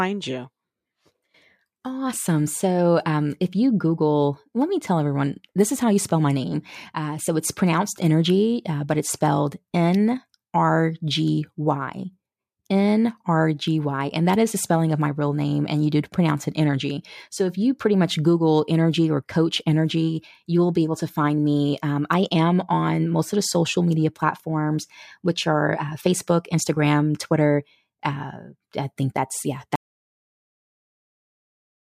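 At 29.76 s, after "I think that's yeah", an audio dropout to silence cuts the speech off to the end. Unlike a fade or gate, room tone vanishes too, likely from lost input.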